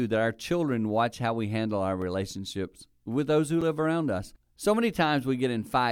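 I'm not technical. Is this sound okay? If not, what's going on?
No. Twice, probably because the playback program failed to deliver sound in time, there is a block of digital silence: a few thousandths of a second of nothing, cut in and out abruptly. You hear a tick at 2.02 s after "how we handle our" and at 3.61 s after "with those who".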